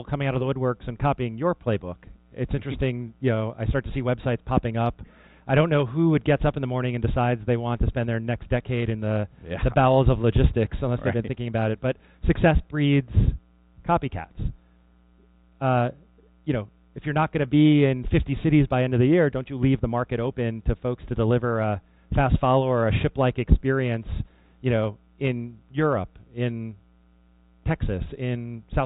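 Nothing technically wrong can be heard anywhere in the audio. The sound stays steady throughout, with no audible problem at any point.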